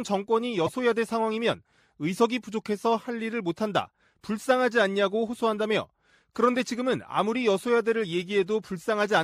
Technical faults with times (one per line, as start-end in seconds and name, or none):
0.66-0.69 corrupt frame decoded